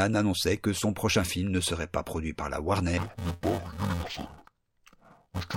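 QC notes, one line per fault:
2.98–5.56 s, interleaved audio read as planar: after "pas produit par la", speech turns dull and robotic, buzzing at 345 Hz (fits 128-sample blocks); spectrogram shows steady 345 Hz harmonic stripes.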